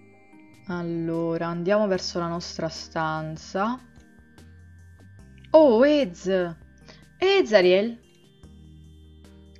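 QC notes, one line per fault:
No faults heard anywhere in this clip.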